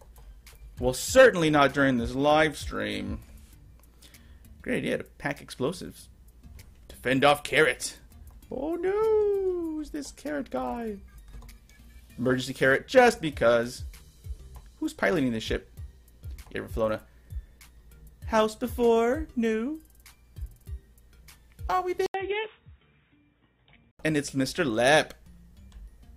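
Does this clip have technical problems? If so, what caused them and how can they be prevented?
Yes. The input likely switched to a poorer device at 22.06 s. After an 80 ms gap, nothing above 3.8 kHz remains, the level falls by roughly 5 dB, and a new, faint noise floor appears, leaving the sound dull and boxy until 23.99 s. Locking recording to a single fixed input device, with automatic switching to headset call profiles turned off, prevents this.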